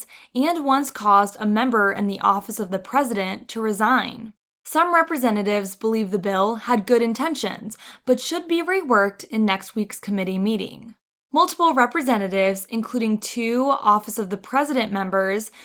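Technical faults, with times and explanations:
No technical faults can be heard in the speech. The Opus voice compression keeps the full band, with the upper range above 8 kHz carried by its CELT layer over SILK, and its light coding texture points to a bitrate around 20 kbps.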